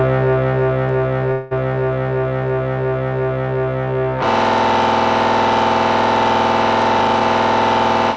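At 0.89 s there's a single sharp click, and the same thing turns up again at 6.82 s. Those are most likely dropped samples: a couple of samples vanish from the stream, so the waveform jumps straight to a later value instead of moving smoothly. That's a tiny fraction of a millisecond, far too short to take any sound away, so all you get is that quick tick, a thin vertical line if you pull up a spectrogram.

Between 1.32 and 1.53 s the sound stalls and stretches into a fading buzzy continuation. That's the call audio freeze. Packets were likely held up in transit, so the jitter buffer ran dry and the receiver kept extending the last bit of sound for about 190 ms. It never drops to silence, and once the packets arrive the audio carries on from where it stopped. Nothing is actually lost. A gap gets inserted, and everything after it runs that much late. The call path's band-limiting is audible throughout, with nothing above 8 kHz, which fits a G.722 link.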